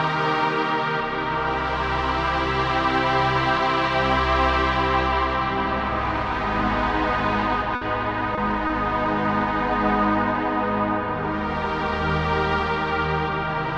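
At 7.75 to 7.83 s there is a burst of packet loss. About 60 ms of audio never arrived in time, and the receiver covered the gap by extending the last sound it had, fading it down as the hole went on. The result is a short held, dimming tail of the preceding sound. When playback picks up again, it jumps forward, and roughly 60 ms of the original material is simply absent.

Two short concealed packet losses follow, at 8.35 to 8.39 s and 8.67 to 8.71 s. In each, about 20 ms failed to reach the decoder, and the receiver synthesised a continuation of the prior audio, then cross-faded back into the real signal. Each is heard as a brief smear or small wobble in the sound.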